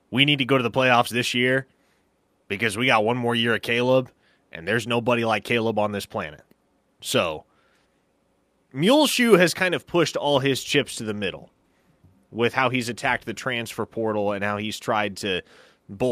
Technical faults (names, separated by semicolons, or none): none